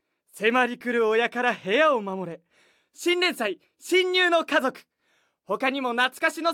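Nothing in the recording stands out as a technical fault, so there's nothing here to pin to a time or trace back to a cause.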